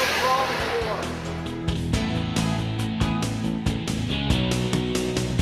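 A short recording, about 5 seconds long, with one skip ahead at 1.75–1.77 s. Playback jumps forward and the audio on either side is butted together with no silence and no filler in between. Roughly 0.4 s of material is simply missing. This likely comes from a stretch being dropped in transit, or thrown out by an overflowing jitter buffer while later audio was already queued. What sets it apart from a dropout is that time lurches forward instead of pausing, so nothing is audibly blanked or smoothed over.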